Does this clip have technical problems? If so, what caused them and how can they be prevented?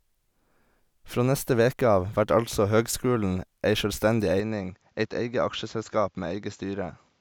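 Yes. From 4.40 s to the end, the speech turns duller, with nothing above 7.6 kHz, drops a few decibels in level and carries a faint new noise floor, with no gap at the change. This is likely an input switched to a poorer device. Pin the recording input to one microphone and disable automatic device switching.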